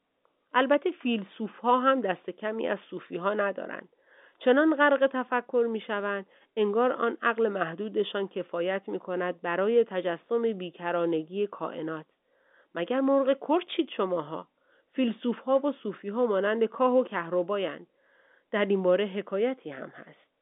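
Speech heard over a telephone line, with nothing technically wrong in it.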